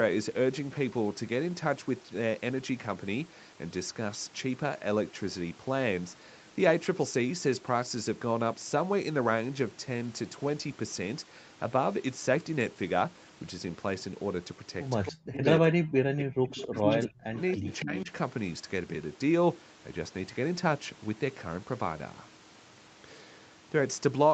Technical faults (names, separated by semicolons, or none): echo leak; speech suppressed in double talk